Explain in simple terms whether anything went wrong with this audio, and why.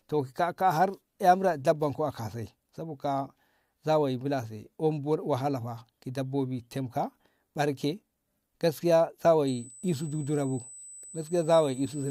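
The USB bus's 8 kHz current pulses leaked into the audio path, so from 9.47 s to the end a fixed-pitch USB whine sits under the speech.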